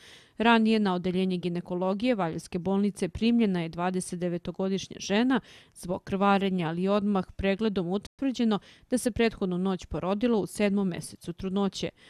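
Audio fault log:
8.07–8.19 s playback stall: the player likely ran short of data or had its thread blocked, so the output falls silent for 120 ms mid-flow before resuming.
8.19–9.37 s time-compressed catch-up: the player clears its backlog by cutting and cross-fading short pieces, so the sound runs 1.1 times fast at unchanged pitch.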